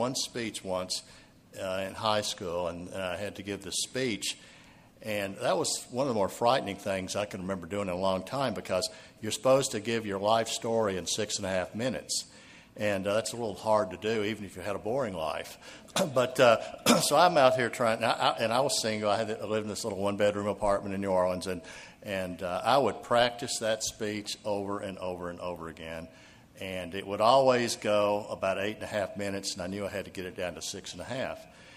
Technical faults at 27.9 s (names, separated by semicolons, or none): none